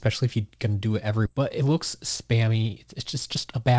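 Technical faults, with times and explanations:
1.26–1.28 s, skip ahead: right after "to do it every", playback jumps forward with no filler, losing roughly 0.7 s of speech. The two sides join almost seamlessly, so it sounds like a clean cut rather than a dropout with silence or a smeared concealment.
2.33–2.70 s and 3.14–3.78 s, jitter buffer speed-up: the speech runs about 13% and then 11% faster while its pitch stays the same, with about 50 ms and 70 ms trimmed as tiny pitch-period slices. Unlike a skip, nothing audibly jumps, and unlike resampling, the voice doesn't rise.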